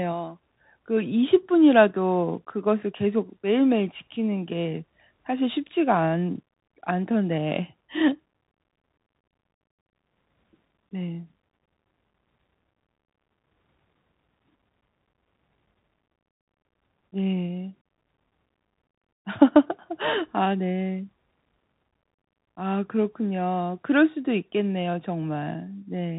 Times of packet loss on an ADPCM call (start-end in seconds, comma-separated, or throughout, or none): none